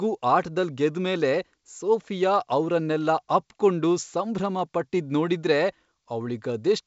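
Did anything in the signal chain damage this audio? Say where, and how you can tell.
No, nothing in the signal chain damaged this speech; it simply passes through G.722 wideband telephone coding at 64 kbit/s, which is why nothing is heard above about 7.7 kHz.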